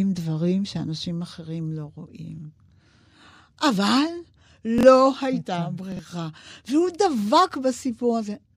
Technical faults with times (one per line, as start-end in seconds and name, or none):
4.78-4.83 chunks out of order
5.92-5.99 chunks out of order